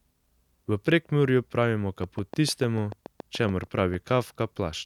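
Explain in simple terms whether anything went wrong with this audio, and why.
From 2.04 to 3.95 s a train of clicks ticks over the speech: roughly fifteen similar pops, evenly spaced at about 6.8 per second and louder than the speech itself. A repeating electrical pulse, likely interference from nearby equipment or a faulty connection or power supply, is adding them.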